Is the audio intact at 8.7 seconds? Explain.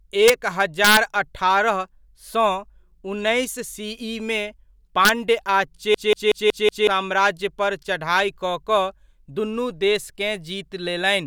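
Yes, the audio is intact at 8.7 seconds, with no dropout, click, distortion or other fault audible at that point in the speech.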